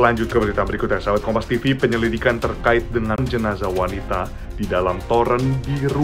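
A CD skip occurs between 3.16 and 3.18 s: a mute of about twenty milliseconds, after which playback resumes at a different point in the audio. That discontinuity distinguishes it from a plain dropout, which resumes exactly where it stopped.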